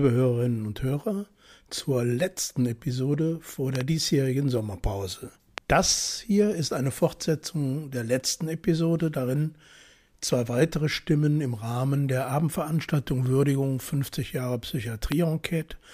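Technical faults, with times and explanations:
3.75–3.83 s (two pops in quick succession), 5.58 s and 15.12 s: loud pop. A sudden voltage step, likely from a switch, plug contact or static discharge, enters the signal path. The following circuitry shapes it into a sharp thump about 15 dB above the sound, which continues underneath.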